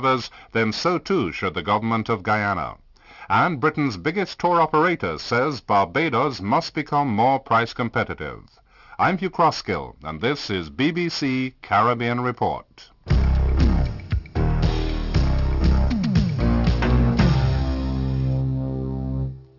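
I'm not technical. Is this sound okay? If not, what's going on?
No. Aliasing runs through the whole recording: it was converted to a lower quality setting without first removing the high sounds, so anything above about 6 kHz folds back as false, unrelated tones. Unlike plain muffling, which just dulls the sound, this adds a gritty, metallic edge.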